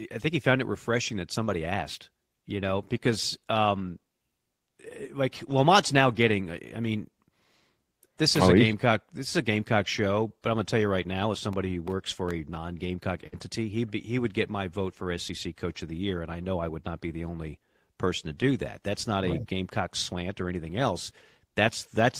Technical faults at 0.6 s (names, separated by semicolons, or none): none